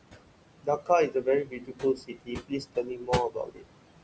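Noise suppressor artifacts run through the whole speech clip. The room noise sits only about 10 dB below the speech, and the suppressor pulls it down by about 21 dB in each band it classes as steady noise, frame by frame. The floor drops away in the gaps and comes back up under the talking. The band limit at 8 kHz from the call microphone processing is normal.

Speech cut by the noise suppressor happens four times. From 0.63 to 0.90 s, about 150 ms of speech drops by as much as about 19 dB. From 1.08 to 1.27 s it dips by about 12 dB. The longest stretch runs from 1.44 to 3.09 s, where most of that span is pulled down by up to about 22 dB. From 3.29 to 3.66 s it drops by about 21 dB. Each time the suppressor treats quiet speech as noise, so endings and soft sounds come out swallowed and faint.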